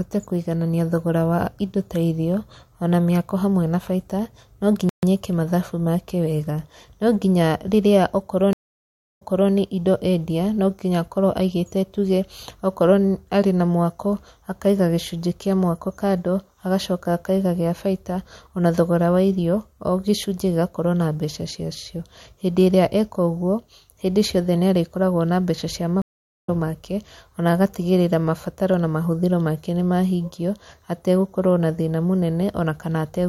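Speech with three dropouts. At 4.89 s the sound halts for about 137 ms and then continues, which marks it as a playback stall, likely the player starving for data or its thread being blocked. The stream reconnect gaps differ because the audio does not pick up where it left off. At 8.53 s a 664 ms silence ends with the sound restarting about 0.31 s earlier, so a short stretch is heard twice. At 26.02 s a 448 ms silence resumes roughly 0.4 s later, skipping material.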